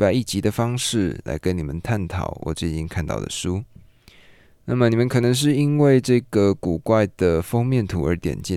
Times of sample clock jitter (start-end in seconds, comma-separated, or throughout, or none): 5.01-8.56